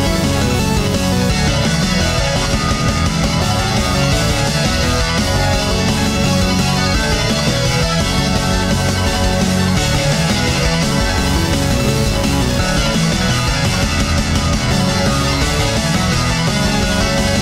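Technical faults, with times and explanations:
No technical faults can be heard in this clip.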